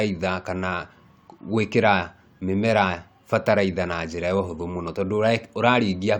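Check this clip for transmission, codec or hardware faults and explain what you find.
Nothing in the transmission path, codec or hardware chain can be heard here to report against this speech recording.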